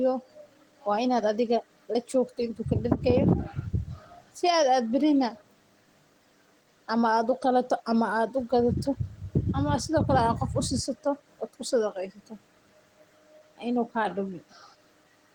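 Listening to the speech from beginning to end, nothing stood out as a technical fault.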